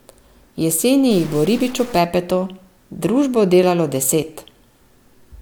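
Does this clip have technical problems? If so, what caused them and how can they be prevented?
Yes. From 1.11 to 1.98 s the speech turns harsh and buzzy, with a gritty noise floor filling the quieter moments. That's the signature of a stuck bit, most likely a single data bit held at a fixed value by a bad line or converter. About half the samples get shoved off by that bit's weight, a step of around -30 dBFS, and because the bit flips with the sign of small values, the gaps fill with noise at that level. Checking the converter and digital wiring with a test tone or a bit-pattern check before recording would catch this.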